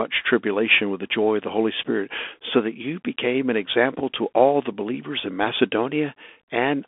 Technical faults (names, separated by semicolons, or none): Bluetooth CVSD headset codec